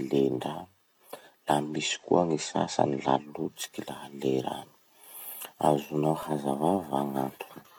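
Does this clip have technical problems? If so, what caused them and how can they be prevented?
Yes, there are two separate problems in this speech clip.

From 1.60 to 3.34 s there's digital radio blending to analogue. The receiver lost its digital signal and cross-faded, over about 183 ms, to the FM broadcast of the same station before returning. Hiss comes up, sitting somewhere around 40 dB under the speech, and the level shifts by about 1 dB. Better reception (a decent antenna or a stronger multiplex) avoids it, as does recording from a tuner with blending switched off.

Then between 5.76 and 6.54 s there are CD scratch ticks: six short, evenly spaced clicks, the longest about 1.5 ms. A scratch on the disc wipes out more data on every revolution than the error correction can rebuild. The player patches over the gap by interpolating or muting, so you get a tick once per turn until the pickup moves past the damage. 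To prevent it, clean or resurface the disc, or rip it with a secure ripper that rereads damaged sectors.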